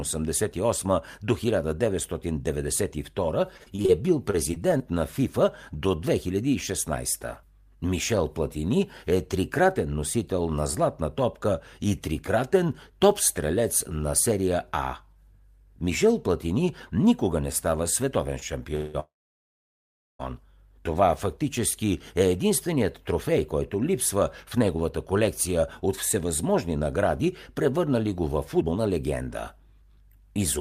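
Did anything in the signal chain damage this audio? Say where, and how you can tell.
Yes. On the network side, packets went missing repeatedly from 3.57 to 3.91 s and again from 4.31 to 4.82 s, after "е бил". That is repeated packet loss, with five short holes in each stretch, the longest about 27 ms. Each hole is filled by extending the previous sound, so the speech turns choppy and robotic.

Twice the jitter buffer ran dry, most likely because packets were held up in transit. That is a call audio freeze, at 18.75 to 18.96 s just after "никога не става световен" and then at 19.00 to 20.21 s. The last sound is stretched and fades, with about 1.1 s of silence in the longer freeze. The speech then resumes where it stopped, with nothing lost.

A jitter buffer speed-up occurred as the receiver worked off a backlog of excess delay by cutting out pitch-period-sized slices. From 28.60 to 28.94 s, right after "награди превърнали го във", speech runs at 136% speed with around 150 ms removed. 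From 29.57 to 30.58 s it runs at 104%. The pitch stays the same, but the first stretch sounds hurried.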